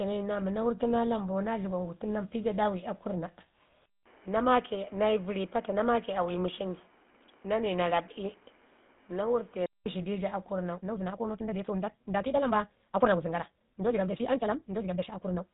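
From the start the speech carries the plainly audible damage of the GSM full-rate codec, with nothing above 3.8 kHz and a buzzy, gravelly roughness consistent with roughly 13 kbps. Pulse-driven excitation of a vocal-tract model causes it, unlike the watery swirl of modern low-bitrate codecs.

From 10.73 s to the end at 15.53 s, the pace jumps to about 1.78 times faster while pitch stays put, sounding choppy and rushed. This is likely a time-stretched section, with short pieces dropped to fit a length. A simple speed-up would raise the pitch.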